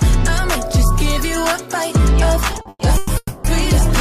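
Repeated stalls (stutter) run from 2.53 to 3.11 s: the buffer starved five times, each gap patched by stretching the last sound, the longest about 120 ms, so the audio drags. A call audio freeze follows at 3.17 to 3.46 s: the sound holds and fades, briefly going silent, then resumes where it stopped, likely from delayed packets emptying the jitter buffer.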